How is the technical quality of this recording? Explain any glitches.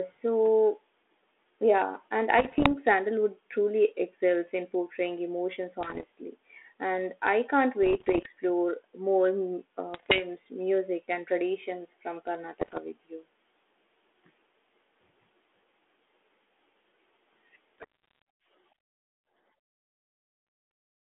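The recording has six patches of bit errors on an ADPCM link. They fall at 2.38 to 2.69 s just after "yeah and", 5.81 to 6.05 s, 7.83 to 8.27 s, 9.94 to 10.23 s between "more mm" and "music and traditions from", 12.60 to 12.79 s after "music and traditions from", and 17.78 to 18.22 s. Each flipped bit corrupts the decoder's step size and prediction, so the error rings on briefly. The result is pops and rough, gritty bursts with short jumps in level. The band runs from about 250 Hz to 3.4 kHz, which fits 32 kbit/s G.726 ADPCM.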